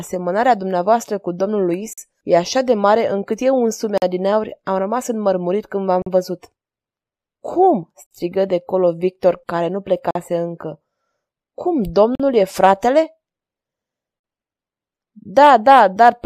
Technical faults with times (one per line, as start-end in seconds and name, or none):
1.93-1.98 gap between chunks
3.98-4.02 gap between chunks
6.02-6.06 gap between chunks
8.06-8.11 gap between chunks
10.11-10.15 gap between chunks
12.15-12.20 gap between chunks
14.20-14.24 gap between chunks